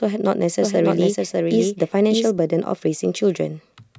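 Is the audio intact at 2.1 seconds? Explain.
No, 2.1 s falls inside a doubled audio track running from 0.62 to 2.38 s. A second full-band copy of the speech trails about 0.7 s behind, a few dB quieter, with no room colour. It's likely a slower capture path picking the audio up twice.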